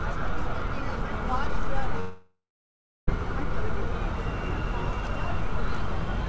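Long network dropout, 2.00 to 3.09 s: the sound decays into a fading buzz, then silence, likely from lost packets, and about 1.08 s never returns.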